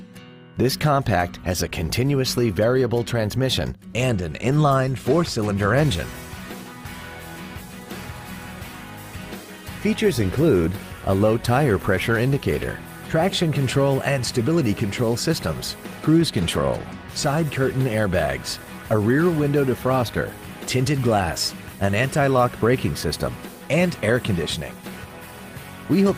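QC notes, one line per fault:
No faults to note.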